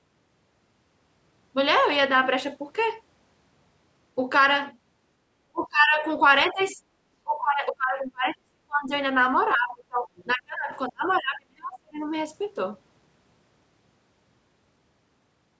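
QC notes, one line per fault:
5.52 to 12.05 s, speech suppressed in double talk: the talker dips hard at 5.52–6.04, 6.5–6.77, 7.23–8.91, 9.54–10.09, 10.33–10.72 and 10.89–12.05 s. The shallowest dip is about 15 dB, and the worst, around 7.2–8.9 and 10.9–12.0 s, is about 35 dB. That takes chunks of it almost to nothing. It's likely the echo canceller hearing both sides at once and ducking everything rather than risk passing echo.
6.66 and 10.17–10.28 s, other side's voice leaking through: two short scraps of a second voice poke through, sitting roughly 30 dB under the talker. They land in or right beside the suppression dips. That likely points to residual loudspeaker echo the canceller didn't fully subtract from the mic signal, so brief bits of the far end slip out.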